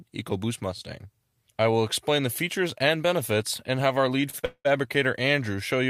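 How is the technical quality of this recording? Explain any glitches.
The recording has one glitch, near the end. From 4.21 to 4.67 s the audio drags and stutters in repeated stalls (stutter): four brief freezes where the last sound is held and, in the longest pause of 196 ms, fades. Packets arrived late, the jitter buffer kept running dry, and the receiver stretched the previous sound, covering 275 ms, about 61% of that stretch, without losing any audio.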